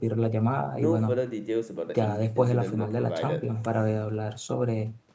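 Nothing stood out on listening to this speech, which carries the expected bass roll-off and top limit near 8 kHz of call microphone processing.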